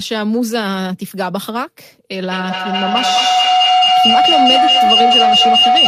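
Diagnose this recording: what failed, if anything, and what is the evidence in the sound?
A feedback howl takes over from 2.13 s to the end. A tone near 700 Hz swells to about 7 dB above the speech and pulses roughly every fifth of a second. On the call, a loudspeaker feeds a nearby microphone, and each pass round that acoustic loop adds gain.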